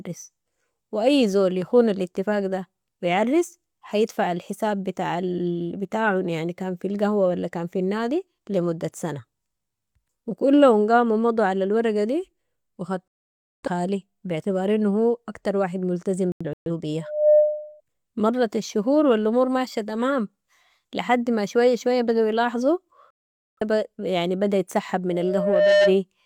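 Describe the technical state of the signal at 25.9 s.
At 25.9 s the speech is overtaken by loudspeaker feedback squeal, running from 25.09 to 25.98 s: the microphone-to-speaker loop exceeds unity gain at 603 Hz, so that tone swells over roughly 0.7 s to a few dB above the speech. On a spectrogram it is a single bright horizontal line at 603 Hz; on the waveform, a steadily growing sinusoidal envelope.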